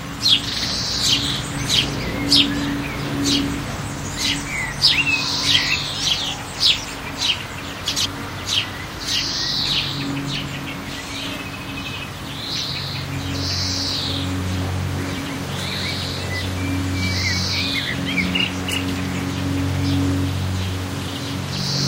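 At 7.88 to 8.06 s and 15.17 to 15.35 s, frames out of order swap two 85.3 ms blocks, giving a garbled flutter.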